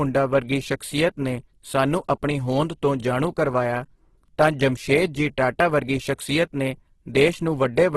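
Speech throughout the clip sounds rough, grainy and noisy, with nothing above 12.2 kHz. This is likely Opus compression in its music (CELT) mode, filling starved bands with folded or noise content, which fits a bitrate near 12 kbps.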